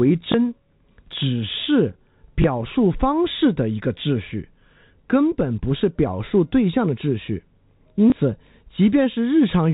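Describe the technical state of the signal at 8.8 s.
At 8.8 s the speech comes through intact, carried in the narrow telephone band of G.711 coding with nothing above 4 kHz, and no fault is audible at that moment.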